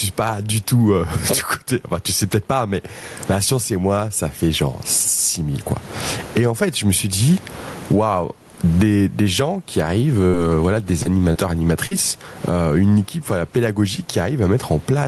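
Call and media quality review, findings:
Gain pumping, throughout: loud and soft parts pulled close in level, sound squashed, with a gain swing of about 25 dB, likely a fast limiter behind excessive mic gain. Waveform shows a flattened envelope.

Burst of packet loss, 10.27–10.35 s, after "des gens qui arrivent": jitter buffer concealment continues the last sound, fading it, then about 60 ms of audio is skipped. Spectrogram shows a smeared, decaying fill before the audio resumes further on.

Short concealed packet loss, at 11.03–11.07 s after "voilà des", 11.33–11.37 s, and 11.87–11.93 s before "euh une équipe voilà": brief smears or wobbles, each filled by decoder extrapolation for roughly 20–40 ms. Spectrogram shows narrow blurred columns.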